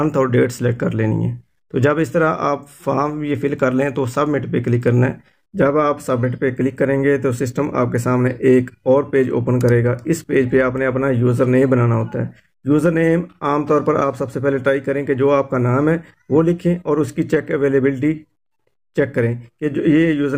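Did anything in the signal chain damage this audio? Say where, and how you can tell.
No, nothing stood out on listening that would point to damage at any stage of the signal chain.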